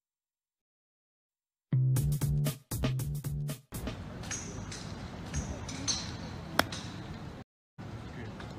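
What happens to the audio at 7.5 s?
A stream reconnect drops the sound from 7.42 to 7.79 s. The connection breaks, leaving about 0.36 s of silence. A fresh decoder then resumes at roughly the same point.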